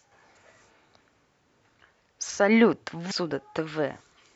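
A brief disturbance breaks into the speech from 0.38 to 0.42 s and again from 3.07 to 3.12 s. Both are damaged data in a compressed stream: corrupted bytes make the decoder misread those frames and lose sync until it finds the next valid frame header.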